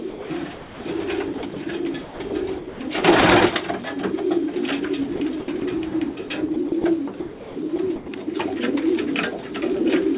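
From 0.1 to 0.8 s the audio stutters, with about 460 ms of it swapped for synthetic comfort noise. This is sound chopped by the voice detector. The sender's gate likely kept judging quiet passages as background and switched in synthetic comfort noise. The same choppiness returns at 1.38 to 1.56 s (about 60 ms filled) and 2.04 to 2.32 s (about 180 ms).

From 2.58 to 2.8 s the sound gives way to comfort noise for about 220 ms before resuming. This is sound dropped by the voice detector, likely because the gate took a faint stretch for silence and stopped sending while the receiver filled the gap. A much shorter dropout of about 20 ms follows at 4.54 to 4.56 s.

The chopping continues at 5.16 to 5.62 s (about 140 ms replaced), 6.28 to 6.84 s (about 100 ms) and 7.2 to 8.08 s (about 500 ms). Throughout, nothing is heard above 4 kHz, which fits a narrowband telephone codec on the call path.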